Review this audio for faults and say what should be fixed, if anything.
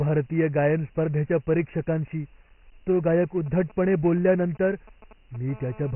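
Dialogic VOX ADPCM, throughout the clip: the speech has been squeezed into 4-bit adaptive differential coding at 24 kbps, which fits a 6,000-sample-per-second VOX file. Nothing remains above 3 kHz, so the speech sounds narrow and muffled. The coding damage is heavy: the coarse 4-bit steps leave a gritty hiss that follows the speech envelope. To prevent it, capture and archive the recording as linear PCM at a higher sample rate, and convert to VOX only for delivery to the phone system.

GSM signalling bursts, 3.14 to 5.51 s: a 2G handset near the recording chain sent short groups of radio bursts while it was signalling to the network. The audio circuitry rectified those pulses, so they come through as a galloping pattern of ticks and brief buzzes at a 217 Hz repetition rate, roughly 25 dB below the speech. To prevent it, keep mobile phones well away from microphones, cables and preamps, or switch them to airplane mode during recording.

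GSM phone buzz, 5.52 to 5.91 s: immediately after the signalling, the handset entered a call and began transmitting continuously at 217 bursts per second. Rectification turns that steady radio pulse train into a hard, raspy buzz at 217 Hz with a dense stack of harmonics. The buzz has no relation to the speech and sits about 22 dB below it. To prevent it, use shielded, balanced cabling with RF filtering at the inputs, and ban active phones from the recording area.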